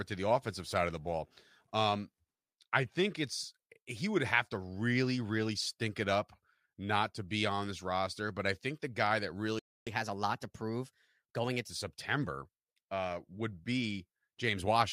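The player most likely ran short of data or had its thread blocked, producing a playback stall: at 9.59 s the speech cuts off mid-flow and the output stays silent for about 0.27 s, until 9.87 s, before resuming where it stopped.

To recover the lost time, the player then resamples its backlog for a catch-up at higher speed. From 9.87 s to 11.70 s the speech runs at 1.15 times normal speed and sounds rushed and raised by about two semitones, then settles back to normal.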